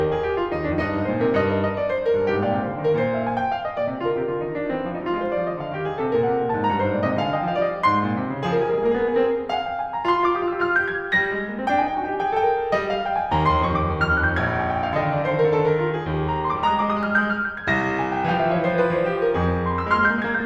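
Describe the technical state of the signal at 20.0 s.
At 20.0 s the music still carries the imaging from linear upsampling that runs through the whole clip. It sounds like material raised from 24 kHz to 44.1 kHz by joining samples with straight lines, a crude filter. The top of the band is dulled, and a faint mirror copy of the spectrum, roughly 50 dB down, sits between 12 and 24 kHz. You hear it as a light metallic shimmer on bright, high content.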